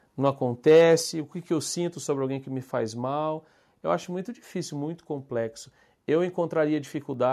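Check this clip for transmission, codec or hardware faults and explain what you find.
Two faults show up, both early in this speech clip.

Microphone overload, 0.67 to 0.94 s, just before "o que que eu": the loudest peaks push about 3 dB past the converter's limit and their tops are flattened, giving a harsh, crackly edge. The likely cause is microphone input gain set too high.

Microphone volume stepped down, at 1.02 s, right before "o que que eu": the voice and the background drop together by about 4 dB in one abrupt step. This is likely the call software lowering the input level after that distorted burst.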